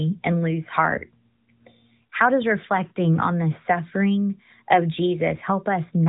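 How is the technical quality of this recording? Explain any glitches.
No glitches or technical faults can be heard here.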